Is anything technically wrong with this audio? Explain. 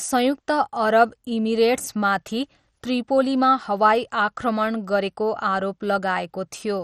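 Yes. All the way through, the speech sounds dull and carries a gurgling, granular roughness, which is most likely MP2 compression. MPEG Layer II splits the signal into 32 sub-bands and shares a bit budget among them. Here it ran short, so the upper bands shut off and nothing comes through above 14.3 kHz. The surviving bands flicker and are coarsely quantised, which fits a heavily squeezed stream at around 56 kbps.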